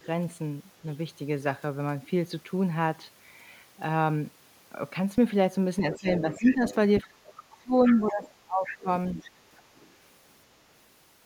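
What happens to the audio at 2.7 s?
Nothing goes wrong at 2.7 s; the speech carries on intact through that moment.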